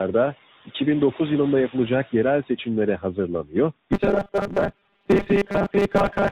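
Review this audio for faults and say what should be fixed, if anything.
Tandem speech coding runs through the whole recording. The speech is rough, muffled and warbly. The degradation is heavier than any single narrowband codec would cause, which fits three speech codecs in a row, ending in something like AMR-NB at around 10 kbit/s. Each decode and re-encode stage compresses the previous stage's artefacts again, so the distortion accumulates. To prevent it, keep the call in one codec end to end, using transcoder-free operation or codec pass-through between networks.

From 3.93 s to 6.31 s there is robotic sound from repeated short buffers. The speech becomes a rigid metallic buzz at 200 Hz that still loosely follows the speech contour. A 200 Hz buzz corresponds to a segment of about 5 ms being looped, and roughly half of the real audio in that span seems to be replaced by repeats. The likely cause is audio arriving too late, so the playout side fills the gaps by replaying the last short buffer. 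To prevent it, give the playout path adequate buffering, keep the capture and processing threads from being starved, and conceal late audio with proper interpolation rather than looping. The room noise, about 21 dB below the speech, does not need fixing.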